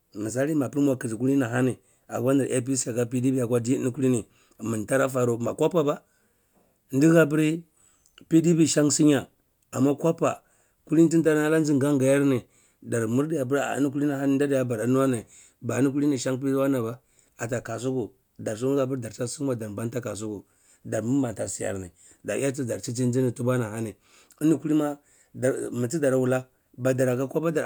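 No technical faults can be heard anywhere in the speech recording.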